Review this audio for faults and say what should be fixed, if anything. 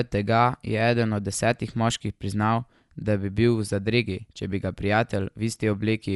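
Across the whole clip the speech sounds dull, with nothing above 11.5 kHz and a rough flutter around tones. That's likely Dolby Digital compression, with a bitrate that fits around 64 kbps. Give the encoder a higher bitrate, or re-export from the original master.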